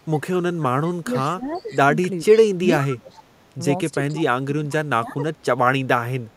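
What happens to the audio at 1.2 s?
Around 1.2 s the speech is caught in speech suppressed in double talk, running from 1.02 to 1.81 s. The level dips by roughly 15 dB in patches, about half a second of it in total, likely because the echo canceller clamped down while both sides were talking at once.

Just before that, from 1.14 to 1.19 s, there is a brief echo leak: a faint copy of the voice, roughly 20 dB below the speech and delayed by 488 ms, comes back. This likely reflects residual loudspeaker pickup that the far end's echo canceller failed to remove.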